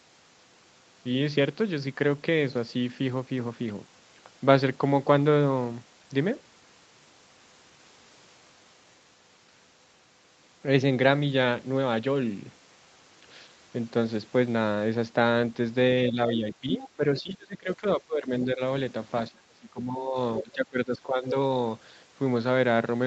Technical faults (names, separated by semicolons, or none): speech suppressed in double talk; other side's voice leaking through